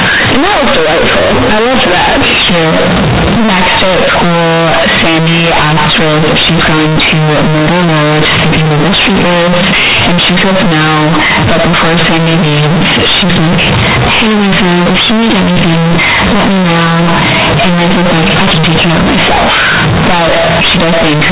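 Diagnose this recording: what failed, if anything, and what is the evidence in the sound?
Harsh, buzzy distortion at very high loudness runs through the whole recording, with pauses filled by heavy noise. The fault lies in sample-format conversion: companded audio read as linear. Mu-law bytes from the otherwise intact G.711 stream are played as plain 8-bit samples without expansion, so every sign change swings the output across half its range.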